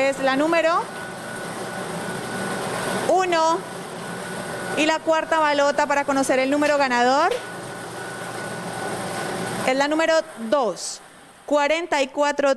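No technical faults can be heard in this audio.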